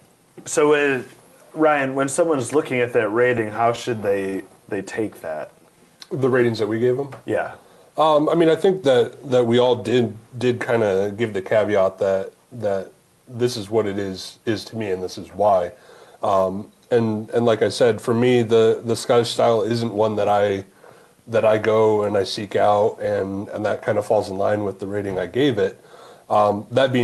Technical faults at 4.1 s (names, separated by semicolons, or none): repeated stalls (stutter)